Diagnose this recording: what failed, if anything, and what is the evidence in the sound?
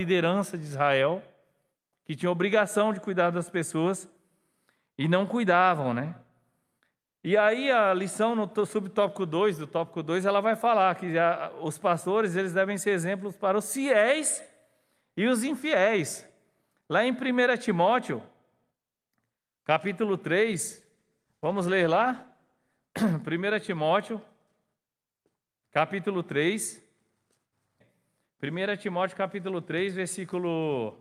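Call bitrate drop, codec stage, 20.53 to 23.89 s: the speech turns coarse and dull, which fits the encoder falling from 48 to 18 kbps.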